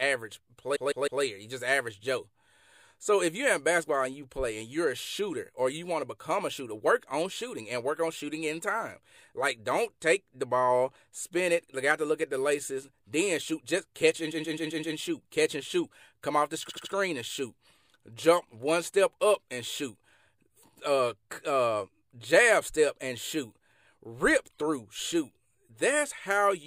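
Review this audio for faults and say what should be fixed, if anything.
Repeated frames: compressed frames were written or delivered more than once, so the decoder loops the same short block, heard as a stutter. A 0.16 s block plays three extra times at 0.75–1.22 s, a 0.13 s block five extra times at 14.31–14.96 s, and a 0.08 s block three extra times at 16.68–16.92 s. To prevent this, track frame sequence numbers when writing or receiving the stream and drop any frame that has already been written.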